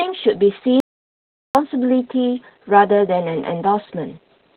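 From start to finish the speech sounds muffled, hoarse and slightly robotic, with nothing above about 4.4 kHz. That is heavy Opus voice compression: the SILK coder in narrowband mode has cut the top of the band and coded the excitation coarsely, which fits a rate near 8 kbps.

At 0.80 s the sound cuts out completely, leaving dead silence with no room tone, and returns mid-flow at 1.55 s. This audio dropout to silence, lasting about 0.75 s, likely came from lost input while the recorder kept writing silence, so that stretch is gone.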